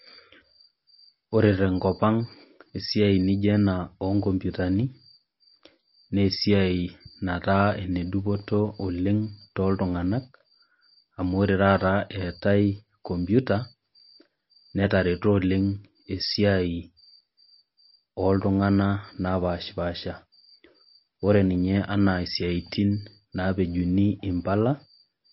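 Likely MP3 compression at a low bitrate, fitting 32 kbps, runs throughout: the encoder discards everything above 5.6 kHz, leaving plainly audible codec damage.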